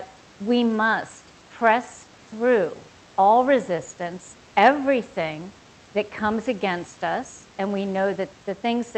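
No technical faults are audible.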